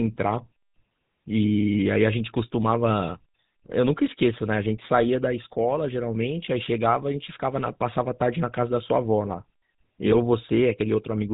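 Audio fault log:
Throughout: GSM full-rate codec. The speech has a steady buzzy, gravelly roughness and nothing above 4 kHz, which fits 13 kbps GSM full rate. A vocal-tract model driven by sparse regular pulses causes this. Unlike bit errors, the damage is uniform and never bursts.
7.33–7.41 s and 10.07–10.20 s: GSM bit errors. Short squawking, gargling bursts, the second longer. Corrupted filter, pitch and gain values warp individual frames. Packet loss would leave gaps or smeared repeats, but here the sound distorts without stopping.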